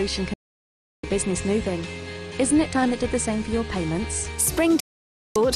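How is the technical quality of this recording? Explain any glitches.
Two digital broadcast dropouts, at 0.34 to 1.04 s and 4.80 to 5.36 s: the receiver lost valid frames and muted, fading to silence within about 3 ms; the missing audio doesn't return.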